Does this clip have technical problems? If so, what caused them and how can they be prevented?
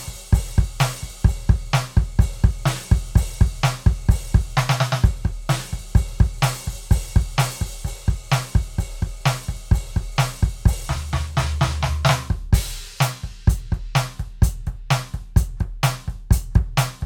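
No, the music comes through with its signal intact and no technical faults to be heard anywhere in the recording.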